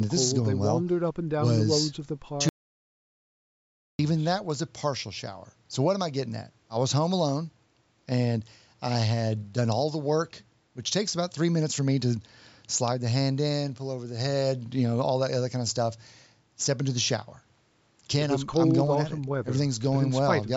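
An audio dropout to silence runs from 2.49 s to 3.99 s in this speech recording, cutting the talker off mid-flow and bringing them back just as abruptly about 1.5 s later. The gap is dead silence, with no room tone or background underneath, so whatever was said then is simply gone. That pattern most likely comes from the input being lost, through a dropped link, disconnected device or momentary mute, while the recorder kept writing silence. The surrounding speech carries the band limit of call microphone processing, with nothing above 8 kHz.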